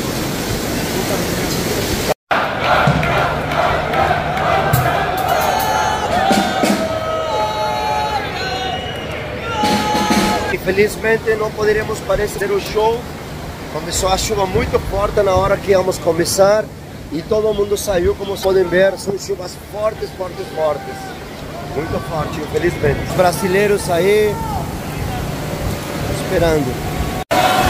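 At 12.37 to 12.41 s and again at 18.41 to 18.45 s, damaged data in the compressed stream produces a brief chirp or blip of about 40 ms. Corrupted bytes make the decoder misread those frames, lose sync and hunt for the next valid frame header.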